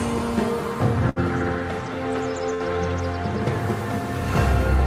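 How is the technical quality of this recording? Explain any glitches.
Two short glitches spoil it, both a burst of packet loss. At 1.09 to 1.19 s and again at 2.54 to 2.63 s, roughly 60 ms of packets never arrived. The receiver stretched and faded the last sound to cover the gap, then jumped ahead, so you hear a brief held smear before the audio skips.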